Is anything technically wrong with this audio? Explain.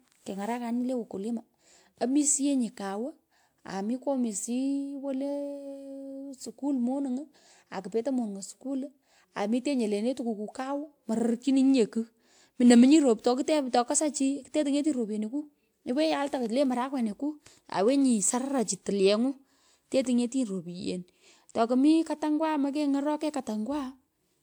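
Yes, there's generation loss throughout. The speech sounds swirly, hollow and smeared, with blurred consonant attacks and nothing above 20.1 kHz. That's likely from about four passes through a lossy codec like WMA at 128 kbit/s, each pass requantising on a shifted frame grid.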